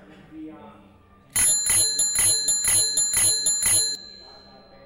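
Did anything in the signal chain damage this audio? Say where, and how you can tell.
Yes. From 1.99 s to 3.95 s the sound turns into a broken-record loop: a fragment of about 0.49 s plays four times back to back, each repeat identical, after which the clip moves on. The likely cause is a stall at the playback or buffer stage, which kept re-sending the last chunk it held. Unlike an echo, the repeats don't fade or overlap, and the audio that belonged in that stretch is missing.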